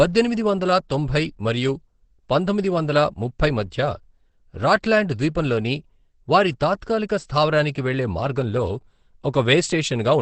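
Opus compression, likely, runs throughout this speech clip, from start to finish. Nothing is heard above about 8.5 kHz, so the sound is confined to a wideband channel, and the heavy damage leaves it muffled and hoarse, the character of the codec's SILK speech mode. That narrowing and mode switch happen when the encoder is starved of bits, and the result fits a very low rate near 12 kbps.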